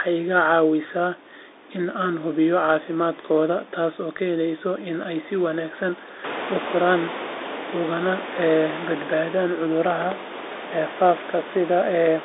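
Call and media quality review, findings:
Bluetooth CVSD headset codec, throughout. Band limited to about 300 Hz–3.7 kHz. Scratchy s sounds, granular hiss. One-bit step tracking overloads on loud highs. Fits a 64 kbps link.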